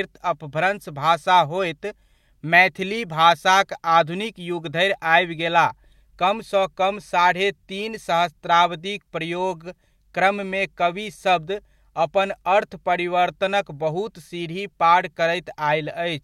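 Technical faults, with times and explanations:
Nothing in the speech recording stood out as a technical problem on listening.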